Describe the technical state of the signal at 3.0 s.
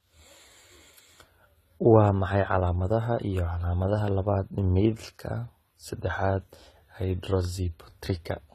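A single sharp click lands at 3.02 s, a thin vertical line across the spectrum. These are dropped samples, likely just one missing sample, so the waveform jumps abruptly to a later value.

Around that moment the speech also carries layered, mismatched compression artefacts. That points to transcoding between lossy codecs, likely a low-rate HE-AAC encode later re-encoded as AAC-LC at a higher bitrate.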